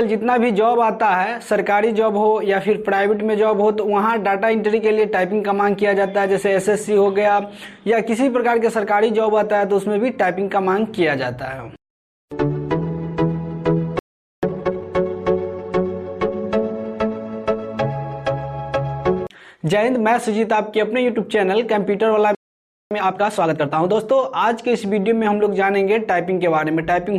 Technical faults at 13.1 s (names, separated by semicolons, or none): none